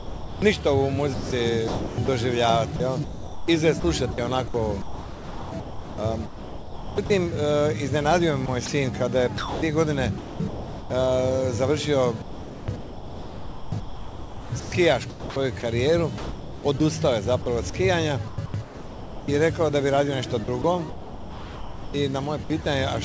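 From 0.0 to 7.1 s, 8.46 to 10.9 s, 12.22 to 19.28 s and 20.44 to 22.66 s the sound turns choppy. Parts of each stretch, roughly 3.4 s, 0.9 s, 3.9 s and 1.2 s, are swapped for synthetic comfort noise. This is likely sound chopped by the voice detector, which gated quieter passages out of band-limited call audio with nothing above 8 kHz.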